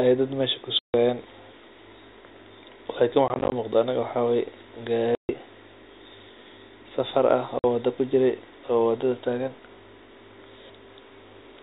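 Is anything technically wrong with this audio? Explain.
Yes. The speech has dropouts from packet loss filled with silence. Packets went missing and the receiver just played nothing in their place. You hear a 150 ms hole at 0.79 to 0.94 s, right after "ay dad meesha". From 3.28 to 3.52 s there's a scattered stutter: about 110 ms lost across 240 ms, in gaps no longer than 20 ms, just before "muuqda aniga waxaa waay". There's a 140 ms gap at 5.15 to 5.29 s, and a 50 ms one at 7.59 to 7.64 s, between "safar ah" and "wada kujiray oo wadada". The gap lengths all land on multiples of 10 ms, which fits 10 ms packets, and the cut-ins have hard edges. The band limit at 4 kHz is just the G.711 telephone coding, which shows no real damage of its own here.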